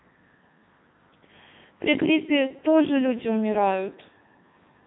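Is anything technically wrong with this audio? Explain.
Yes, the speech runs through a Codec 2 vocoder throughout. At 3.2 kbit/s it keeps only pitch, voicing and spectral shape, rebuilding the voice from sine waves. The result sounds robotic and buzzy with nothing above 3.8 kHz, unlike a plain band-limit, which keeps natural texture.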